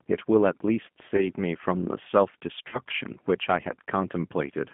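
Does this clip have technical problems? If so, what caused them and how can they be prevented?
Yes. The G.729 codec runs throughout this speech: nothing passes above about 3.4 kHz or below 150 Hz, and the rough, synthetic texture fits 8 kbit/s pulse-based coding, unlike plain band-limiting, which stays smooth. Prevent it by negotiating a wideband codec end to end.

VoIP packet loss concealed by the speech codec occurs at 1.16–1.30 s, about 20 ms missing, fitting one lost packet, and at 2.69–2.79 s, about 40 ms, fitting two. The decoder stretches its last pitch and filter into a fading buzzy tone or coloured noise, and the voice stays weak or distorted for a while after audio resumes, unlike a clean dropout. Prevent it with a jitter buffer and loss-resilient network paths.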